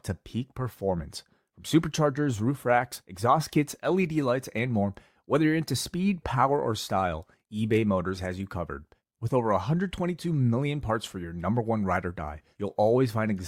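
No technical faults can be heard anywhere in the recording.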